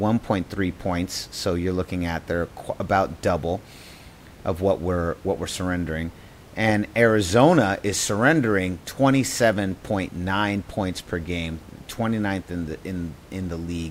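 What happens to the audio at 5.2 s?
Nothing goes wrong at 5.2 s; the speech carries on intact, with only the room's own background noise sitting about 23 dB beneath it as part of the recording.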